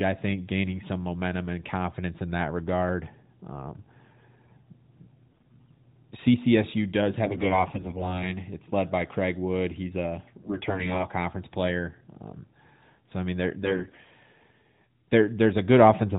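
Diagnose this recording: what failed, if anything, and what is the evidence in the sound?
AMR bit errors, a network-stage fault, hit at 5.29–5.80, 7.26–8.29, 10.42–11.06 and 13.64–13.96 s (after "so I mean they're"). Pitch and level hold but the speech turns hoarse and gargly, as roughly 7 to 10 percent of the weakly protected AMR-NB bits arrive flipped and misplace excitation pulses.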